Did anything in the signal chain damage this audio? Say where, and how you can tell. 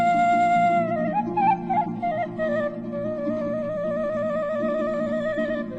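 Yes: MP2 compression damage runs throughout, dull and gurgling, likely from an MPEG Layer II codec, which fits about 80 kbps, starving sub-bands so upper bands flicker off.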